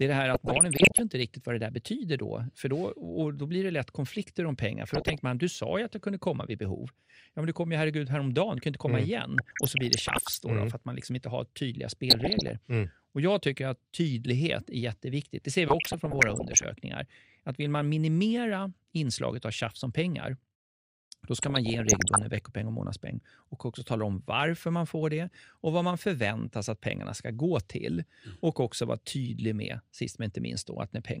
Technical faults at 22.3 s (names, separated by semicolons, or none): MP2 compression; DAB burbling